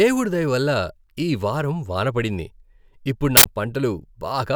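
An uninitialised buffer breaks into this speech recording from 3.37 to 3.46 s as a sudden, loud burst of harsh digital noise lasting about 85 ms. It happens because one block of audio was sent to playback before any samples had been written into it, so whatever leftover data sat in that memory was played as sound. The burst's length fits a single 4096-sample buffer being output unfilled.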